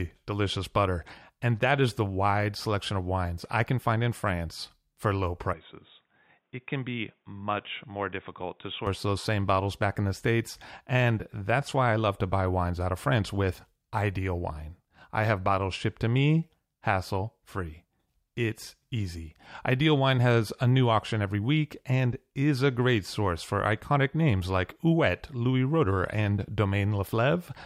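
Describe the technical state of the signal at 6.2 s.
At 6.2 s the speech sounds dull and boxy, with nothing above 3.8 kHz, a level drop of about 5 dB, and a faint new background hiss far beneath it. This narrowed, quieter stretch runs from 5.53 s, right after "for low", to 8.87 s, where full clarity returns before "those same bottles back", with no gap at either switch. The likely cause is the input switched to a poorer device, one with a narrower band and its own noise floor.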